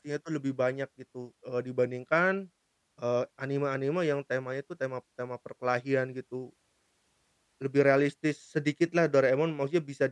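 No technical faults can be heard.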